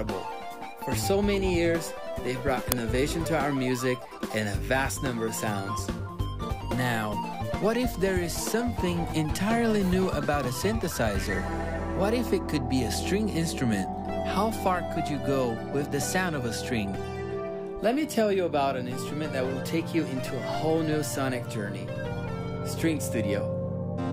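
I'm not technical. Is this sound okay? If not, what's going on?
No. An uninitialised buffer at 2.72 s causes a tiny, loud crack: leftover memory was played as sound before real audio filled that slot.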